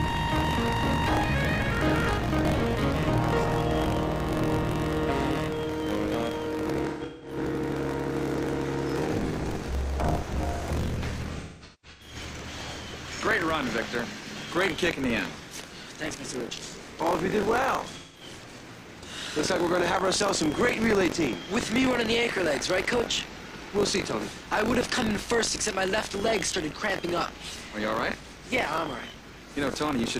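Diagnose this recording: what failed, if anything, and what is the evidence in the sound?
Buffer tearing at the driver or buffer stage: a steady robotic buzz at 46.9 Hz runs throughout and is present only when there is sound, which fits a 1024-sample buffer. Each period splices in a small slice of audio roughly 40 ms stale between hard joins. Unlike underrun dropouts, there are no gaps.

AAC frame loss with concealment at the codec stage: smeared, noisy, phasey patches appear at 6.88–7.37 s, 11.32–12.15 s and 17.97–18.21 s, totalling about 300, 512 and 171 ms. The decoder rebuilt the missing frames from the last good spectrum, so these spans blur instead of clicking or going silent like network dropouts.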